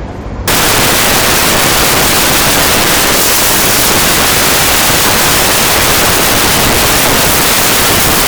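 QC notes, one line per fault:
0.48–8.27 s, samples built from the wrong bytes: from just under half a second in until the end, the sound gives way to loud, harsh broadband noise. The bytes of each sample are being assembled wrongly, through swapped byte order, a one-byte offset or a misread alignment, so the rapidly changing low-order bits land in the most significant position and swamp the real signal with broadband hash.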